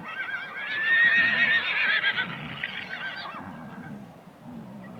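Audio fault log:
No faults are audible anywhere in this recording of sounds. Nothing in it calls for a timed entry in this log.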